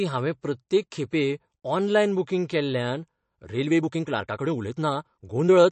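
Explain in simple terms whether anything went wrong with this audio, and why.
Yes, two things went wrong. The first runs through the whole recording. It sounds like MP3 compression at a low quality setting. The damage is easy to hear. The encoder had too few bits to spend. It threw away the treble and dropped quiet details. That leaves a watery, swirly texture and smeared edges on sounds. A tight compression setting is the likely cause.

The second starts at 3.58 s, right after "बूकिंग केल्ल्यान", and lasts until the end of the clip. This is a time-stretched section. Here the speech suddenly runs about 1.39 times faster, yet the pitch stays the same. The software keeps the pitch by cutting out tiny slices of sound. That makes this part sound rushed. Fitting the audio into a shorter length is the likely reason.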